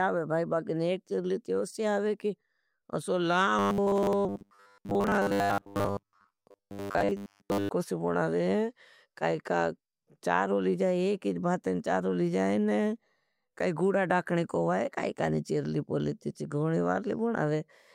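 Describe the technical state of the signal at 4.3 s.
At 4.3 s the speech has turned into a rigid, metallic buzz locked at 100 Hz, still loosely tracing the syllables. It is robotic sound from repeated short buffers, running from 3.59 to 7.7 s, just after "ओसी आवे की असो". The likely cause is new audio arriving too seldom, so playback keeps looping the last fragment of about 10 ms while the real signal is skipped. That fixed repeat rate imposes the buzz, and most of the stretch is this repeated material.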